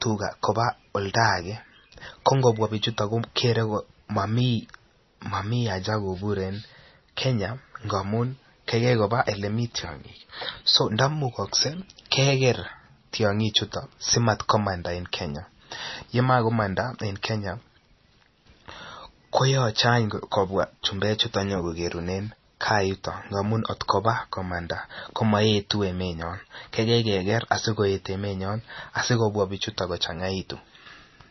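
Speech with heavy MP3 compression throughout: nothing above about 5.9 kHz, plus watery, swirly artefacts on the s sounds, likely from a low bitrate around 24 kbps.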